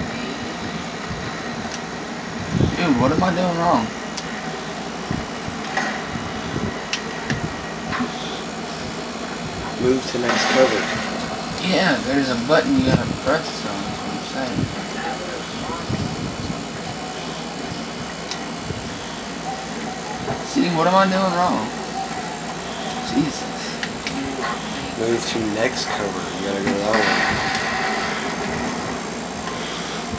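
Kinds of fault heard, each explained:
No technical fault can be heard anywhere in this audio. There is nothing to list under any kind.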